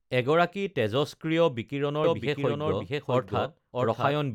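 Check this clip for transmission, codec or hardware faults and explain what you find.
One fault is present: a doubled audio track from 2.04 s to the end of the speech. At 2.04 s a second full-band copy of the speech abruptly appears, trailing the first by about 0.7 s at about the same loudness, so each phrase is heard twice and overlaps the next. The likely cause is the same signal reaching the mix a second time through a slower path. Unlike acoustic echo or reverb, the copy has no decay, no room colour and no further repeats.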